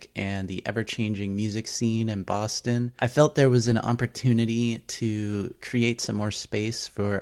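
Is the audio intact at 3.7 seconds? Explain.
No. From 3.65 to 3.71 s, between "I felt there was" and "opportunity to create some", a lost packet was rebuilt from error correction. About 40 ms of speech, which fits two lost 20 ms packets, was replaced by low-bitrate copies carried in the following packets. There is no silence, but the patch sounds briefly rough and noisy. The waveform stays continuous, with no gap, while the spectrogram shows a short, grainier, less cleanly structured strip.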